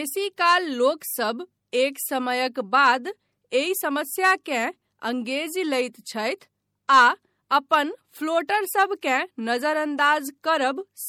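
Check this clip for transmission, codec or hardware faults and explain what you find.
One fault affects the entire clip. MP3 compression is the likely cause: an encoder short of bits, consistent with about 64 kbps. It removes everything above 19.7 kHz and zeroes weak frequency lines that flicker between frames, so the speech sounds plainly watery and swirly, with smeared attacks.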